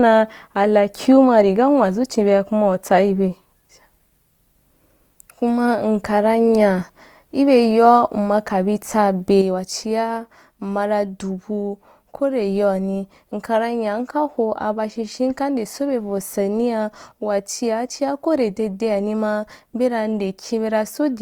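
From the start, the speech carries plainly audible Opus compression damage, likely from an encoder in its music (CELT) mode. Consonants and vowel harmonics come out grainy and rough rather than swirly, because bands with too few bits are refilled with folded or noise-like content. The roughness fits a bitrate near 24 kbps. The band stays full width, with energy reaching about 20.2 kHz. On a spectrogram, harmonics look smeared and speckled instead of clean.

At 9.42 s a sudden gain jump drops everything by about 6 dB in a single sample and stays down to the end. It likely comes from a gain setting applied without a ramp. The speech and the background noise fall together, with a possible click at the step. The waveform shows the envelope halving abruptly at that point, and the spectrogram darkens evenly across all frequencies from there on.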